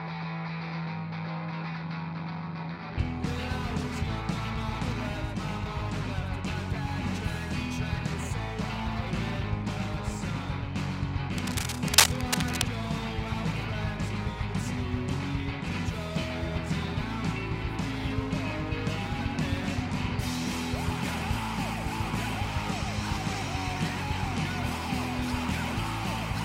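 From 11.38 to 12.62 s, cable scratch noise, likely from a worn cable or connector being moved, lays dense, uneven scratching a few dB above the sound.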